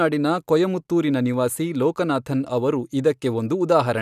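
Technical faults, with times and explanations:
No technical faults are present in this speech.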